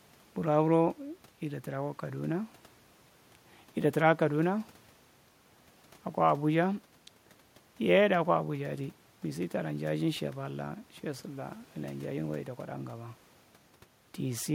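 No technical faults can be heard anywhere in this speech recording. A low background noise from the room sits about 35 dB below the speech, as part of the original recording.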